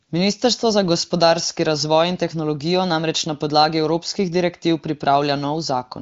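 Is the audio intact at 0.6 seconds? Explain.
Yes, at 0.6 seconds the speech runs intact, with nothing there beyond the ordinary band limit of the AMR wideband (HD Voice) codec carrying it at 18.25 kbit/s.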